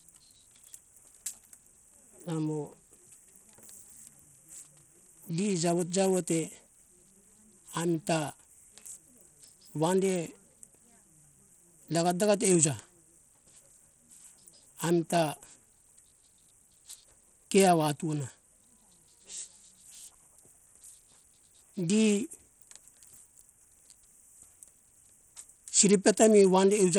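Throughout the speech, the audio has likely passed through Bluetooth SBC compression with a starved bit pool, and the damage is plainly audible. SBC's simple allocation leaves the weak upper sub-bands with few or no bits and quantises the rest coarsely, which fits a low bitrate near 80 kbps. The result is treble that thins out and flickers, with a gritty, grainy noise and aliasing clinging to the voice from start to finish.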